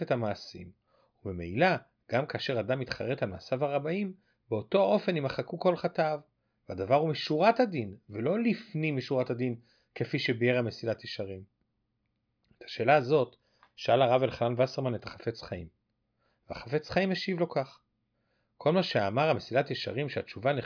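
No audible technical faults occur anywhere in this recording.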